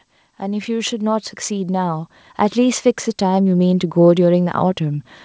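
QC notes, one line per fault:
0.40–4.01 s, automatic gain rising. The level climbs steadily by about 12 dB across roughly three and a half seconds. Speech and background noise swell together, so the room grows louder along with the talker. The gain control judged the input too quiet and raised its gain slowly rather than in one step. The call path carries this with nothing above 8 kHz, which fits a wideband codec such as G.722.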